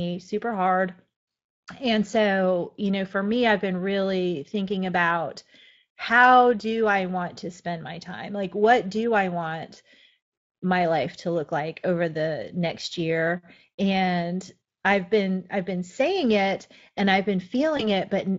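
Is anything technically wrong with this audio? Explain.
Yes. Right after "saying it and I've", from 17.77 to 17.89 s, there's VoIP packet loss concealment by the speech codec. This fits a single lost 20 ms frame. The Speex decoder, which elsewhere adds only light coarseness, filled the gap by extending the previous pitch and filter at falling gain. The speech smears into a brief stretched sound, a buzzy tone or fading coloured noise, and stays weak for about a tenth of a second. A plain dropout would sound different, with a sharp silent gap or click and no stretched tone or slow recovery.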